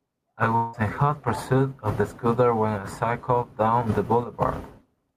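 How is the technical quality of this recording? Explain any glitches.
The recording has one clear glitch near the start. From 0.55 to 0.76 s there is a long network dropout, likely from a run of lost packets. The receiver stretches the last sound into a fading buzzy smear for about 180 ms, with no silence, and speech resumes with roughly 180 ms of content gone.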